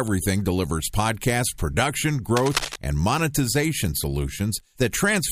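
From 2.37 to 2.76 s, a burst of cable scratch noise rides over the speech, sitting only a little below it in level. It sounds like rough, uneven scratching rather than a single click, and the likely cause is a worn cable or connector being moved, which makes the contact resistance flicker. Unlike steady hiss, it is dense but irregular and confined to that moment, and unlike a dropout, the speech underneath continues without a gap.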